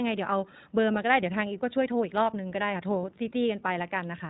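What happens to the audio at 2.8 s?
At 2.8 s you're hearing the iLBC codec, which colours the whole clip rather than just that moment. It codes each 20 ms frame on its own, so speech is cut off above 4 kHz and sounds plainly rough and synthetic, consistent with its roughly 15 kbps mode.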